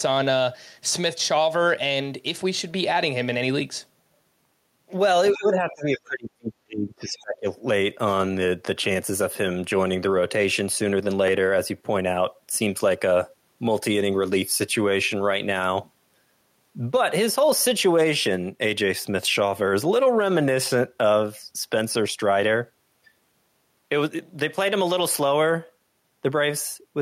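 At 5.30 to 5.36 s a brief scrap of a second voice comes through, roughly 20 dB below the main talker. This is the other side's voice leaking through, likely because the talker's device plays the far end on a loudspeaker and the echo canceller left some of that signal in the microphone path. It is short and faint, heard as a fragment rather than as words.

From 5.34 to 7.48 s the talker's own speech is suppressed in double talk, for about two seconds in total. Both ends appear to be speaking at once, and the echo canceller most likely could not tell the near-end voice from the loudspeaker echo, so it attenuated everything. The talker's level sinks, at its deepest by roughly 30 dB.

Within that stretch, at 7.18 to 7.23 s, a second, weaker leak of the other side's voice appears. It is roughly 30 dB below the speech and heard as a faint fragment under the suppressed talker.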